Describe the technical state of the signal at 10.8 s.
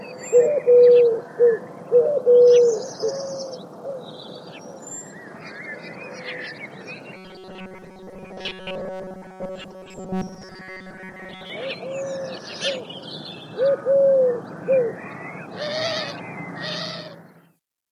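At 10.8 s the sound is a rigid, metallic buzz pitched near 188 Hz, loosely tracking the original. This robotic sound from repeated short buffers runs from 7.17 to 11.50 s, likely caused by audio arriving too seldom, so a roughly 5.3 ms buffer is replayed for most of that span.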